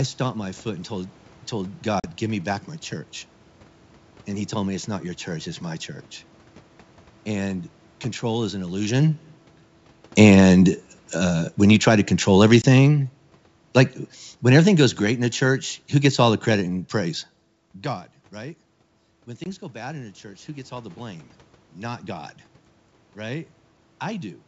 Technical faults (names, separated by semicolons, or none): packet loss on an ADPCM call; automatic gain falling